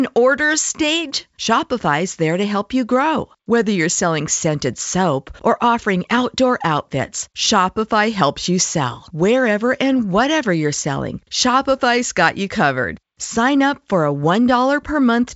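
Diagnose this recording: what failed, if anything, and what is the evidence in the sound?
Nothing stood out on listening: the speech comes across as ordinary wideband telephone audio, with the band ending at about 7.7 kHz as that path allows.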